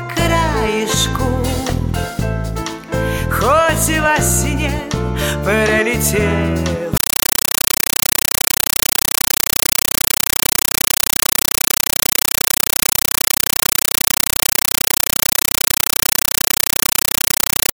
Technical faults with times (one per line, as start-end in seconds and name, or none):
6.97-17.73 compressed stream played as audio